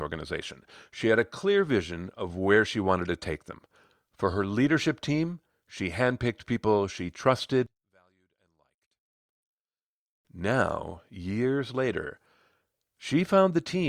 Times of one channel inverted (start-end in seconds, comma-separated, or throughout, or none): 7.66-10.25